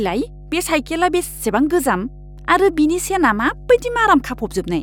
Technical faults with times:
0.00-4.83 mains hum

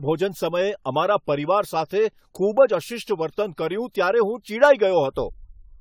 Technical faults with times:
0.00-5.81 generation loss

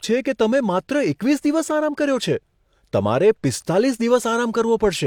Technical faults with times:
0.00-5.06 low-bitrate audio saved at a high bitrate

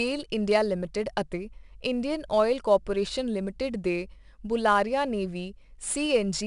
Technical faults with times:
0.00-6.46 4-bit ADPCM compression

